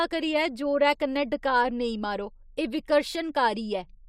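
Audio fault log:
Nothing stood out on listening to this speech clip.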